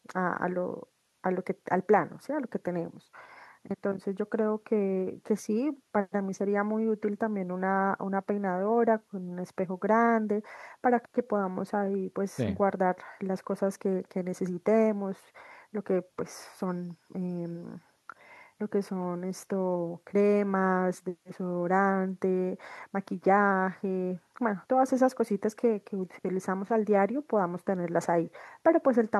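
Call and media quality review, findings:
No audible faults found in the call audio on review; nothing to escalate.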